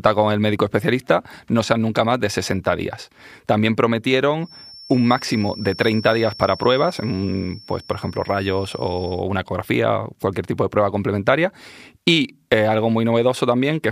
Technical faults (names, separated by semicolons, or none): feedback whistle